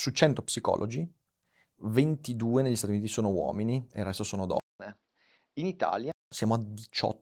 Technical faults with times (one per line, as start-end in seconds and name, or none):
4.60-6.32 input switched to a poorer device